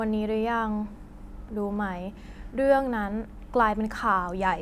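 No technical faults can be heard anywhere in the signal.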